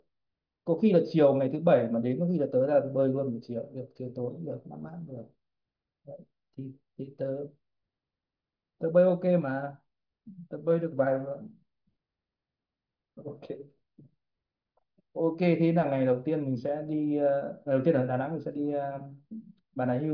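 No technical faults can be heard anywhere in the speech.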